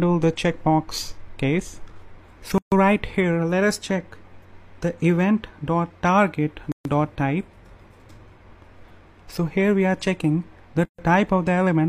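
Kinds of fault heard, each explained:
Gap at a join of encoded pieces: the audio was encoded in separate chunks and butted together without trimming, so each join keeps the encoder's start-up delay and the padded final frame as dead air. Here the continuous sound drops out three times, at 2.58 s, 6.72 s and 10.85 s, once every 4.0 s, for about 139 ms the first time and 133 ms after that. The cut-off and restart have their edges smeared by the codec, and the sound resumes exactly where it stopped.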